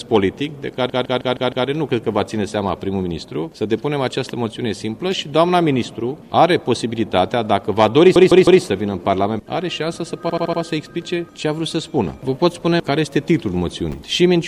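Repeated frames at 0.89 s, 8.15 s and 10.30 s: the same compressed chunk replays (157 ms five extra times, then three, then 78 ms four times), stuttering.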